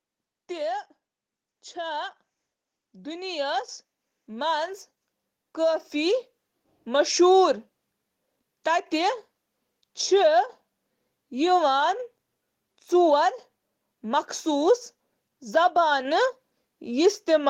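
Automatic gain rising from 1.73 to 7.18 s in this speech: the gain control judged the input too quiet and lifted it about 12 dB, swelling voice and background together.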